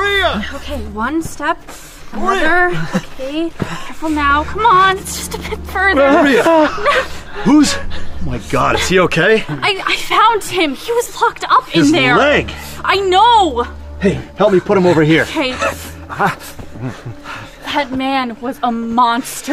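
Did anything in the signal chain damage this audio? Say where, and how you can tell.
Yes. Lost LE Audio frames in the Bluetooth codec link: a brief noisy smear at 4.49 s and another from 11.03 to 11.06 s, fitting one and three lost 10 ms LC3 frames. The decoder refilled them from the last spectrum with random signs, so they blur rather than dropping to silence like a buffer underrun.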